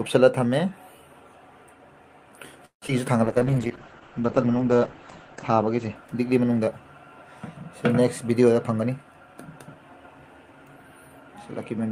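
At 2.65 s the audio stalls until 2.84 s in a call audio freeze, most likely because packets were held up in transit and the jitter buffer ran dry. The receiver stretched the last sound over the wait, with about 120 ms of the 164 ms gap heard as silence. The audio then resumes where it stopped, with nothing lost and a 164 ms gap inserted.

At 2.88 to 2.90 s comes a short concealed packet loss. About 40 ms of audio never reached the decoder in time, and only about 6 ms was filled by extending the preceding sound before blending back. The result is a brief smear or jump, and the delay shrinks by roughly 30 ms.

From 3.25 s to 7.48 s a call bitrate drop takes the encoder from 48 kbps down to 9 kbps, staying at the lowest rate for about 1.87 s. Coarser coding and a bandwidth cut from 20 kHz to 8 kHz make the sound muffled and rough until it clears at the end of that stretch.

Between 8.55 and 9.97 s a jitter buffer speed-up runs the audio at about 110% speed with unchanged pitch. 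The receiver removed short pitch-period pieces, roughly 150 ms in total, to drain excess buffered audio, and the passage sounds hurried.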